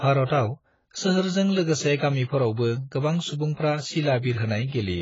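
The speech has most likely been through AAC compression from start to finish, with the encoder starved of bits. The damage is heavy and fits a rate as low as 16 kbps. To save data the codec has discarded everything above 7.6 kHz and coarsely quantised what remains, so the speech sounds dull and muffled, with a smeared, warbling texture on sustained sounds and a fizzy, unstable edge on sibilants.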